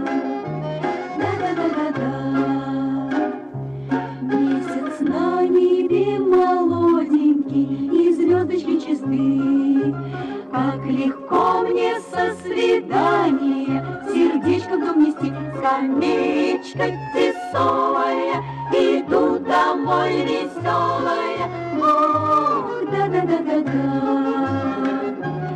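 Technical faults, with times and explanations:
Throughout: hard clipping. The signal was pushed about 4 dB past what some stage in the chain could pass, so its loudest peaks got sliced flat. Only around half a percent of the samples go over, so it's just the peaks that break up. Those flattened tops add harmonics high up the spectrum, which you hear as crackle riding on the loudest moments of the sound rather than on the quieter parts.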